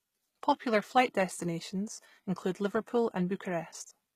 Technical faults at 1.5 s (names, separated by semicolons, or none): HE-AAC compression